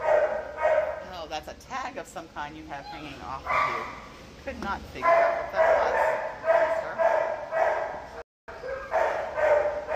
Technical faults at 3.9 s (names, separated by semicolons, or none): none